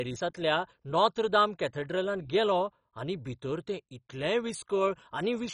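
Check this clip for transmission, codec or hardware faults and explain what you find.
The speech carries a codec fault that runs through the whole clip. It sounds dull and muffled, with nothing above about 10.4 kHz, and a gurgling, granular roughness sits on the speech. That is likely MP2 compression working at a heavily starved rate, one that fits something near 32 kbps. With so few bits to share across its 32 sub-bands, the encoder drops the upper bands altogether and quantises the rest coarsely, so those bands flicker on and off.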